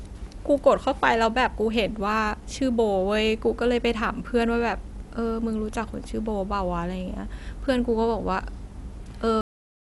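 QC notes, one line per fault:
throughout: Dolby Digital compression, likely the cause of the clearly audible codec damage. The band stops near 11.5 kHz, which fits a low bitrate around 64 kbps. Many frequency lines get no mantissa bits and are refilled with decoder dither, so the speech sounds dull with rough, fluttering noise clinging to tonal parts.
9.41 s: cut-off end. The speech stops mid-sound and falls straight into digital silence, with no natural decay. The final buffers were never written or played out, so the waveform is simply truncated rather than fading, leaving an abrupt edge at the close.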